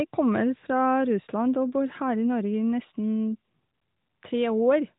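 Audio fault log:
No faults found in this speech clip.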